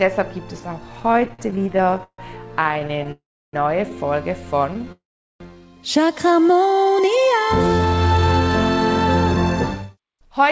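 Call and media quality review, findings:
Repeated stalls (stutter), 1.0–3.1 s: 35 brief hangs, longest 150 ms, about a quarter of the span held on continued sound. Jitter buffer repeatedly underrunning on slow packet arrival. Unlike a freeze, many short drags, not one long gap.

Call audio freeze, 3.12–3.55 s and 4.92–5.42 s: sound held then faded, going silent for 320 ms and 410 ms, 415 ms and 482 ms inserted. Likely jitter buffer underrun from delayed packets. Single long insert, nothing lost, unlike stutter's rapid hangs.

Jitter buffer speed-up, 7.0–10.5 s: audio runs about 7% fast at unchanged pitch, roughly 0.3 s trimmed. Receiver dropping pitch-period pieces to shed excess buffered delay. Pitch steady, which separates it from resampling; band ends at 8 kHz, fitting G.722.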